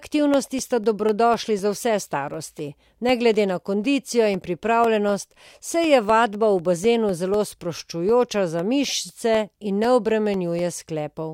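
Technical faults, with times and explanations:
0.09–11.09 s, periodic USB or driver dropouts: every 0.25 s a sliver of about a millisecond drops to silence, roughly fifty times, as something blocks the audio path on a fixed schedule. The strict four-per-second spacing, ticking only under speech, separates it from random clicks.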